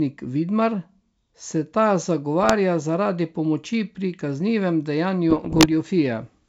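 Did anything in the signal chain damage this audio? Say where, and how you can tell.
Yes, bit errors on an ADPCM link, in transmission. Rough, popping bursts with brief level jumps appear at 2.41–2.53 s, between "se ta" and "zaradi pomoči", and at 5.30–5.67 s. Each flipped bit corrupts the decoder's step size and predictor, so the disturbance rings on past the error itself.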